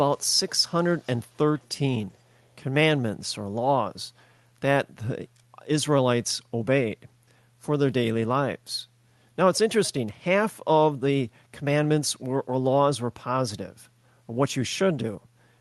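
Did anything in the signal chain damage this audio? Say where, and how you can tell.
Yes: echo leak at 0.16–0.2, 0.83–1.38 and 1.59–1.69 s, very faint copies trailing speech by 390 ms, likely a far-end echo canceller leaving loudspeaker residue.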